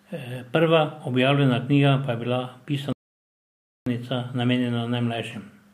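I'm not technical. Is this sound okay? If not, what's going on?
No, not quite. At 2.93 s the speech cuts out and there's dead silence for almost a second, until 3.86 s, then it carries on. That's a playback stall, likely the player running short of data or getting briefly held up.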